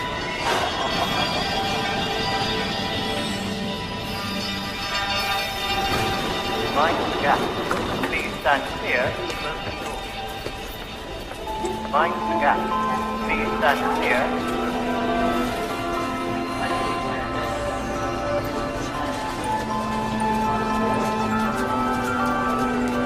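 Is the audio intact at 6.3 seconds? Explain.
Yes, the audio at 6.3 seconds plays through cleanly, with no dropout, click, distortion or other fault at that point.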